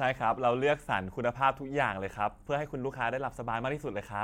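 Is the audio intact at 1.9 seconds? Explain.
Yes, the speech at 1.9 seconds plays through cleanly, with no dropout, click, distortion or other fault at that moment.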